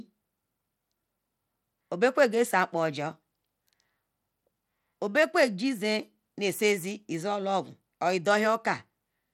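From start to end the speech carries plainly audible coding damage, likely from Bluetooth SBC compression. Nothing remains above 17.2 kHz, and the coarse sub-band quantisation leaves a gritty texture on the sound, consistent with a low bit pool around 96 kbps.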